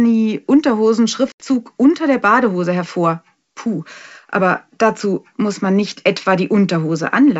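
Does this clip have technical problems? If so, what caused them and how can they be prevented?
Yes: packet loss on an ADPCM call leaves a hard-edged silent gap from 1.32 to 1.43 s, about 80 ms, before "unter der". The decoder's predictor and step size then restart out of step with the sender's. Packet-loss concealment with ADPCM state resynchronisation, or redundancy on a better-protected link, would prevent it.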